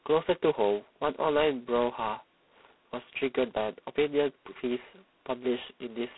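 From start to finish the speech carries heavy G.726 ADPCM damage. Each sample keeps only a coarse step from an adaptive prediction, and a harsh, rasping hiss rises and falls with the speech level, which fits the 16 kbit/s mode. The line passes roughly 200 Hz to 3.7 kHz, with nothing above 3.9 kHz. A spectrogram shows a flat ceiling there and grainy noise smeared between harmonics wherever speech is loud.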